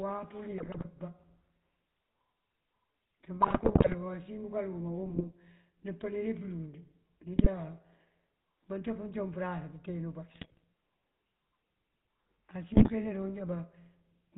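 Speech heard through the GSM full-rate codec, with the buzzy, gravelly roughness and nothing above 4 kHz that fits 13 kbit/s pulse-excited coding of the voice. GSM bit errors corrupt the decoder's filter, pitch and gain values, bursting into squawks and gargling at 0.58–0.87 s, 3.42–3.95 s, 5.06–5.25 s, 7.36–7.51 s, 10.29–10.64 s and 12.74–12.90 s.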